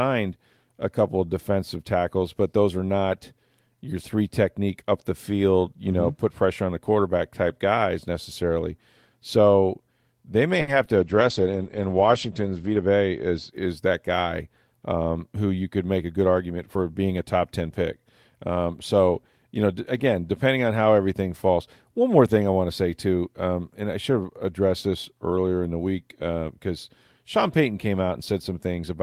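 At 10.61 to 10.69 s, just after "they may", a packet arrived late and the jitter buffer ran dry, causing a short stall from a late packet. The receiver held the last sound for about 60 ms until the packet came, then resumed. Nothing is lost, but the sound lingers briefly with a faint buzz or dip, and the playback delay grows by about 60 ms.

From 10.85 to 10.88 s, short concealed packet loss follows. About 20 ms of audio never reached the decoder, and the receiver bridged the gap by extending the preceding sound before blending back into the real audio. It comes across as a tiny smear or wobble.

At 10.97 s a call bitrate drop begins. The bandwidth estimate fell, and the encoder was pushed down to a coarser setting, which fits a fall from about 32 kbps to about 12 kbps. The audio bandwidth shrinks from 20 kHz to 8 kHz, so the speech turns muffled. It sits at its worst for about 1.8 s and recovers by 13.56 s.

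From 13.86 to 14.47 s, leading into "um who you could", a jitter buffer speed-up trims excess buffered audio. Pitch-period-sized slices, around 70 ms in total, are removed, so the speech runs about 9% fast at unchanged pitch and sounds briefly hurried.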